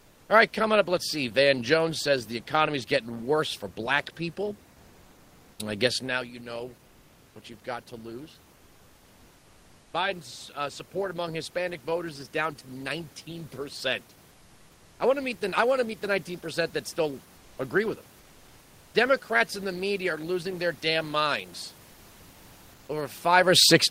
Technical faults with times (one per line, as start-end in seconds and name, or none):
0.00-0.29 comfort noise in place of the background
14.31-14.99 comfort noise in place of the background
17.37-17.57 comfort noise in place of the background
18.19-18.93 comfort noise in place of the background